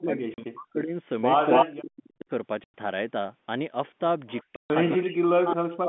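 Speech over a telephone-band line. Speech suppressed in double talk dims it from 0.0 to 0.95 s, 1.65 to 2.29 s and 4.97 to 5.88 s; the level sags as deep as 40 dB, showing as thinned, faded stretches on the spectrogram, likely from an echo canceller confused by both sides talking. Packet loss filled with silence cuts hard-edged gaps at 0.34 to 0.38 s (40 ms), 2.64 to 2.74 s (100 ms) and 4.56 to 4.70 s (140 ms), fitting 20 ms packets; each appears as a flat, silent waveform gap with vertical edge lines. Echo leak brings back a copy 273 ms late at 1.51, 4.28, 4.85 and 5.51 s, louder than the speech at first and fainter after, likely from a loudspeaker's echo canceller missing its own pickup, seen as a delayed duplicate of earlier spectral patterns.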